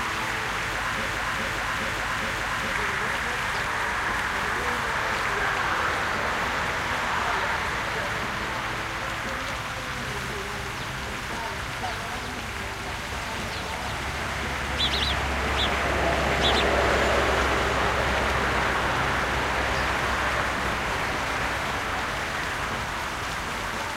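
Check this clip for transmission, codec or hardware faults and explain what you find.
One fault is audible. From 1.06 to 2.72 s there is a broken-record loop. A 415 ms fragment repeats exactly four times, likely from a stalled stream resending its last buffer. The sound meant for that stretch is lost.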